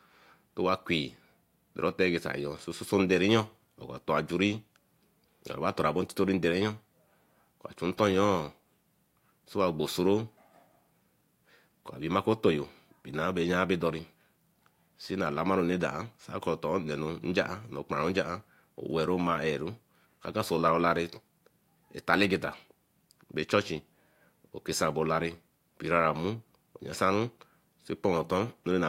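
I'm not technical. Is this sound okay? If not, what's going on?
Yes, the recording is technically sound, with nothing in the signal that points to a recording or playback problem.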